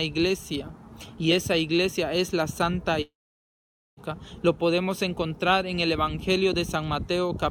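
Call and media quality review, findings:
Long network dropout, 3.01–4.00 s. Sound continues as a fading buzz, then about 0.86 s of silence. Resumes further on, with about 0.96 s skipped rather than delayed. Likely receiver concealment running out during sustained packet loss. Brief packet loss would leave no silent gap.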